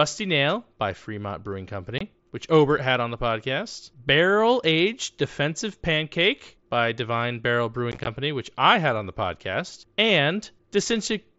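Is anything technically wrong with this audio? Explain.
Yes. There is unconcealed Bluetooth headset packet loss, heard through the wideband mSBC headset link (speech up to 8 kHz). From 1.98 to 2.01 s, about 23 ms of audio drops out, which points to a few consecutive lost packets replaced by silence. It sounds like a brief hole with abrupt edges. From 7.92 to 8.07 s, just before "which I had on", 75 ms of losses are scattered across 150 ms in runs of up to 15 ms, so the sound briefly turns chopped and crackly. Concealed loss would smooth or fill these gaps, but here they are left as hard silent cuts.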